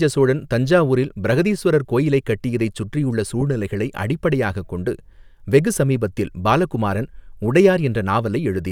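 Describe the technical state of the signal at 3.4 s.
At 3.41 s, right after "பிரஹதீஸ்வரர் கோவிலைக் கட்டியதை சுற்றியுள்ள", there's a lost LE Audio frame. The 10 ms gap fits one dropped frame, which the LC3 decoder patches by reusing the previous spectrum with random signs, giving a brief noisy smear.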